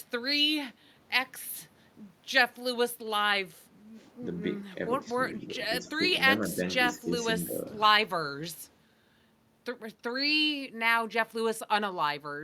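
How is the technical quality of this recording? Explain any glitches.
The speech has two echo-canceller problems, both packed into the middle of the clip.

Speech suppressed in double talk hits at 5.37–5.59, 5.81–6.02, 6.37–6.62, 6.95–7.13 and 7.39–7.65 s. The voice dips by about 5 dB, about 10 dB at 6.95 s, likely because the canceller ducked it during overlap. These show as waveform notches and fading spectrogram bands.

An echo leak at 5.41–5.46 s is a faint copy delayed by 198 ms, about 35 dB down, likely residual loudspeaker pickup. It appears as a weak, time-shifted smear on the spectrogram.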